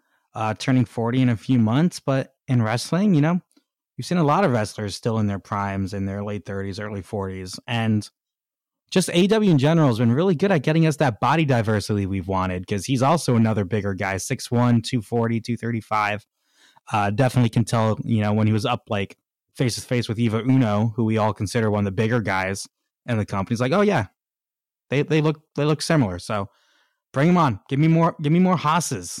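Hard clipping runs through the whole speech recording. The signal was driven about 7 dB beyond what one stage could pass, so its loudest peaks, roughly one or two percent of the samples, were sliced flat. Those flat tops add high harmonics, heard as crackle riding on the louder syllables. Unlike soft saturation, which rounds peaks and thickens tone gradually, the distortion switches on abruptly at the peaks and leaves quieter passages untouched.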